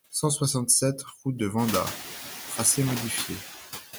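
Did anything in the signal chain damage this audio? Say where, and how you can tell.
Yes. In the call-processing stage, noise suppressor artifacts run through the whole clip. The suppressor pulls steady background down by about 6 dB between syllables and releases it under them. On a spectrogram, the noise floor appears as patchy, blinking tiles. The room noise, which rises around one and a half seconds, is genuine.

In the analogue wiring, there is loose connector crackle from 2.56 to 3.07 s. A poor contact makes and breaks the circuit, which chops the signal. The waveform shows scattered sharp spikes and dropouts. The spectrogram shows irregular full-height vertical streaks.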